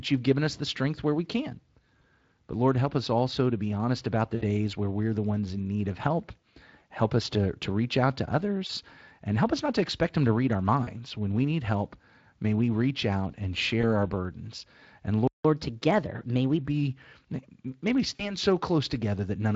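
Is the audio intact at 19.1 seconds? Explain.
Yes, the speech is intact at 19.1 seconds, with no dropout, click or other fault at that moment.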